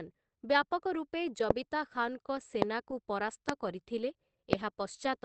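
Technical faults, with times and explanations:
Throughout: low-bitrate audio saved at a high bitrate. This high-bitrate MP3 has nothing above 8.5 kHz. Its speech keeps the artefacts of a low-bitrate source, likely 16 kbit/s Opus.
1.51–1.53, 2.62–2.64, 3.49–3.51, 4.53–4.55 s: loud pop. Single sharp clicks, each roughly 25 dB above the speech, are likely voltage spikes. The speech continues underneath.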